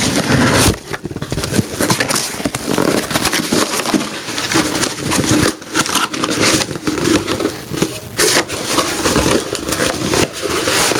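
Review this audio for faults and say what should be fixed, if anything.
There's gain pumping running through the whole clip: the level gets pulled down on each loud sound, swinging by something like 25 dB. That's likely input gain set way too hot, with a fast limiter clamping down. Back off the preamp gain and loosen the limiter so it isn't working constantly.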